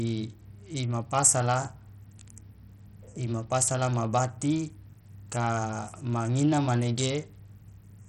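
The link was likely running Bluetooth SBC compression at a very small bit pool, which fits roughly 64 kbps. Throughout the speech, nothing survives above 16.9 kHz, the upper treble flickers, and heavy gritty quantisation noise with aliasing rides on every syllable.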